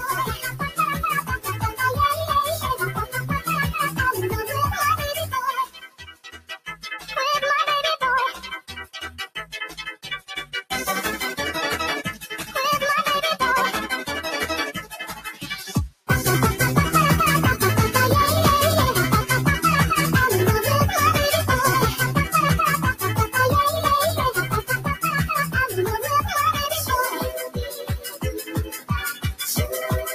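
A speech-oriented noise suppressor left running on this audio treats steady content as noise, so the level pumps by around 10 dB, showing as a fluttering waveform envelope and smeared, patchy harmonics on a spectrogram. Sound cut by the noise suppressor sinks by up to about 17 dB at 0.0–7.09 s, 8.6–10.71 s, 14.83–16.09 s, 22.94–23.35 s, 24.62–26.07 s and 27.14–29.25 s, where sustained tails collapse into dark gaps while attacks survive.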